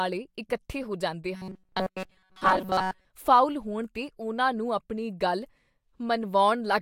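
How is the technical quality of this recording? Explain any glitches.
The recording has one glitch: robotic sound from repeated short buffers. From 1.36 to 3.06 s, the speech turns into a rigid, metallic buzz at 188 Hz. It follows the original only roughly. The likely cause is audio arriving too seldom. The software then fills the gaps by looping the last few milliseconds. A 188 Hz buzz fits a repeat about 5.3 ms long. Roughly 70% of the audio in that stretch appears to be repeats.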